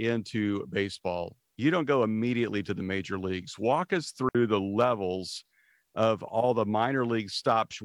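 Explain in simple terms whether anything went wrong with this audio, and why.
Yes, one thing went wrong. At about 4.29 s the sound cuts out completely for 60 ms, then comes straight back. That's a digital wireless dropout: the radio link lost too much data, so the receiver briefly muted itself, leaving a clean gap with no crackle around it.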